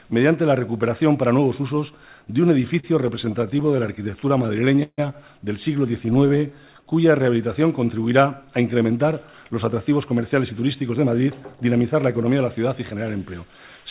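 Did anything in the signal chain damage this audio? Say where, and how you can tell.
Yes, the damage is in the network and jitter-buffer stage of a call path, where the sound is band-limited to 4 kHz in a way that fits a 64 kbps G.711 mu-law link. From 2.62 to 5.00 s there are repeated stalls (stutter). The buffer ran dry 23 times, and the receiver stretched the last sound to cover about 387 ms in total, with the longest wait at 148 ms. Nothing drops out, but it drags.

Then, from 6.06 to 7.13 s, you get a jitter buffer slow-down. The receiver repeated single pitch periods to rebuild its reserve, adding 128 ms, so playback runs at 89% speed with the pitch unchanged. Sounds come out drawn out.

Finally, from 8.92 to 12.96 s, there's a jitter buffer speed-up. The buffer had too much queued, so the receiver trimmed short pitch-period chunks, roughly 0.3 s in all, and playback runs at 106% speed at the same pitch. 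It sounds a bit hurried.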